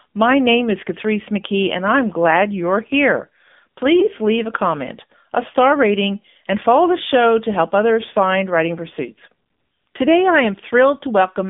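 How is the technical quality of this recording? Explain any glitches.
Technical quality is rough, with a narrowband phone sound and one short glitch.

Throughout, it's AMR narrowband mobile codec: audio squeezed into roughly 200 Hz to 3.6 kHz, buzzy and synthetic, which fits a low mode around 7.4 kbps.

From 4.00 to 4.07 s there's a brief dip or warble from lost AMR speech frames. It sounds like a single frame where the decoder filled in from the previous one before recovering.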